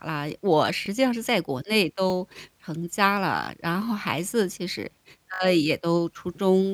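Repeated buffer at 0.86, 2.1, 3.44 and 5.34 s: late data replays a 20 ms piece, up to three times, heard as a buzzy stutter rather than a silent dropout.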